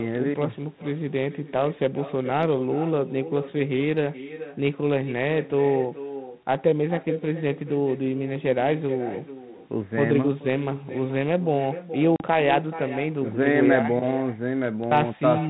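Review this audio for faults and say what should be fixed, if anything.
Echo with no canceller runs throughout. The far end's loudspeaker feeds its microphone, returning speech roughly 0.4 s later, about 13 dB quieter. Enabling acoustic echo cancellation at that end prevents it.

Packet loss on an ADPCM call hits from 12.16 to 12.23 s. About 40 ms, a couple of packets, drops to silence. The decoder's predictor then briefly mistracks. Jitter buffering with loss concealment and decoder state recovery prevents it.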